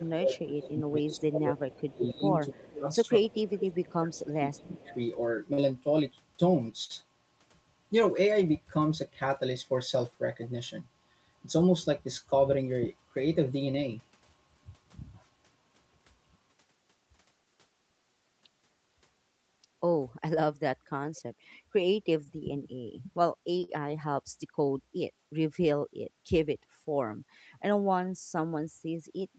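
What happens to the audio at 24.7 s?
At 24.7 s the speech is inside a jitter buffer speed-up running from 23.78 s to 24.80 s. The receiver's buffer was holding more audio than its target, so it cut out short segments of one or a few pitch periods in quick succession, removing about 50 ms in total. Playback runs at roughly 105% speed with the pitch unchanged, so the passage sounds slightly rushed.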